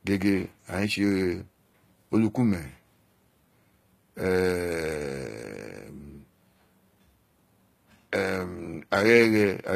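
From start to finish, the s sounds come across gritty and lispy, and the treble, though present, has a synthetic, metallic sheen that doesn't sit naturally on the lower harmonics. Nothing reaches above about 14.9 kHz. This is likely HE-AAC compression at a low bitrate, around 20 kbps: only the lower spectrum is properly coded, and the top is rebuilt by copying lower bands upward under a coarse envelope, so the replicated treble misaligns with the original harmonics.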